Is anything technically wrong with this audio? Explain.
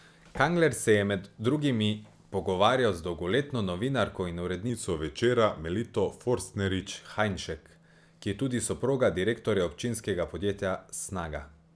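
Yes. From 4.70 to 6.83 s, just after "z dolgoletno novinarko in", the speech shows a wrong sample rate fault: the samples are clocked out slower than they were captured, with no resampling in between. The ratio fits audio recorded at 24 kHz being played at 22 kHz. As a result, the speech runs at 0.919 times its proper speed, and its pitch drops by 1.47 semitones, so the speaker sounds lower and slightly dragged.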